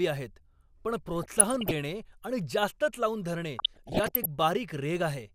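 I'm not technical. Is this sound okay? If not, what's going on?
No. This is DAB burbling: the digital radio signal was weak, so some corrupted data slipped past the receiver's error correction into the audio. Parts of the sound then got short blips of noise, giving a burbling texture over the speech. It happens from 1.23 to 1.73 s, after "आहेत पण" and before "आणि जास्तच लावून धरणे", and again from 3.59 to 4.26 s, just after "आणि जास्तच लावून धरणे".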